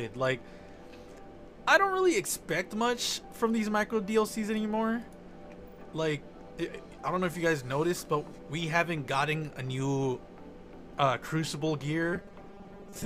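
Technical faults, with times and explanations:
12.13 to 13.05 s, robotic sound from repeated short buffers: right at the tail, the sound goes hard and metallic, with a fixed buzz near 200 Hz sitting on top of it. That pitch fits a 5 ms stretch being looped, and it's likely the playback was starved of new audio and kept replaying its last buffer. Roughly half the material gets repeated rather than played, so the real sound is skipped in places and only loosely tracked.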